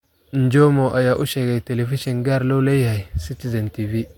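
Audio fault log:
Nothing stood out on listening to this speech recording.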